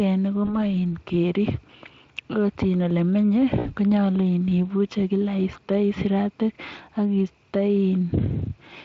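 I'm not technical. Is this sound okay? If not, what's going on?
No. At 0.45 s and 3.59 s there is VoIP packet loss concealed by the speech codec. Bits of the call went missing, and the decoder covered each gap by stretching the last sound into a fading buzz. The second gap, about 60 ms, is three times the first and leaves the voice thin briefly afterwards.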